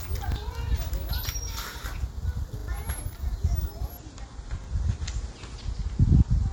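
A repeated buffer at 0.32 s makes a 40 ms slice of audio play twice with a hard join, a short stutter that fits a 40 ms buffer replayed when fresh data came late. The same fault returns at 2.6 s with two extra plays, swallowing roughly 70 ms.

From 3.97 s to the end, the adaptive stream switches abruptly to a lower bitrate with no gap. Nothing remains above 9.7 kHz, the treble dulls and codec artefacts rise, pointing to AAC dropping from 96 to 32 kbit/s as the connection slowed.

Inside that stretch, another repeated buffer at 4.64 s stutters one 40 ms slice once more.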